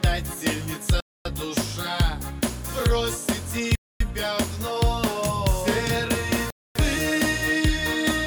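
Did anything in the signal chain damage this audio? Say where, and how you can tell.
Yes. The sound stops dead three times, at 1.00 to 1.25 s, 3.75 to 4.00 s and 6.50 to 6.75 s. Each hole is 250 ms of silence with hard edges, and they recur every 2.75 s. This is a gap between chunks, introduced where the audio was split into 2.5 s blocks for streaming, storage or playback. Nothing is missing from either side of each join; the blocks are simply spaced apart, with silence inserted between them.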